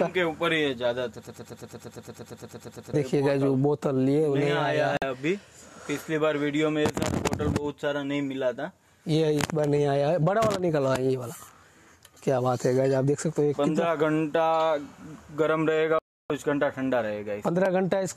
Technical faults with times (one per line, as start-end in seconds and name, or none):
1.27-2.94 broken-record loop
4.97-5.02 digital broadcast dropout
15.99-16.30 digital broadcast dropout